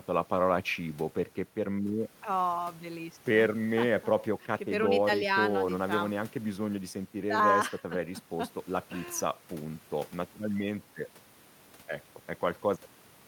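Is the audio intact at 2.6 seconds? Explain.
Yes, the speech at 2.6 seconds plays through intact, with no audible technical fault at that moment.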